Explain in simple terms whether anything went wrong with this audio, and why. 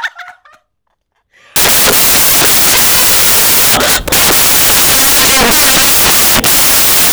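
From 1.56 s to the end, the speech turns into loud hiss: samples built from the wrong bytes, so tiny fluctuating details became each sample's main value.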